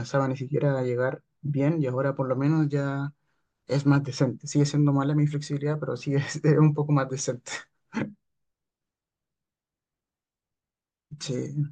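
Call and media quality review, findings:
Nothing stood out on listening to the speech in this clip.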